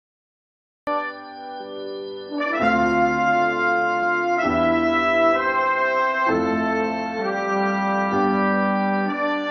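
The music opens with a cut-off start. Digital silence runs until 0.87 s, then the audio begins mid-sound, with no natural attack or fade-in.

At 4.03 s there is an overlap between stream segments. About 15 ms of music is dropped where segment timestamps collide, so the waveform jumps, heard as a brief click or skip.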